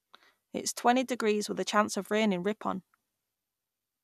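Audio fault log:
No faults heard anywhere in this speech recording.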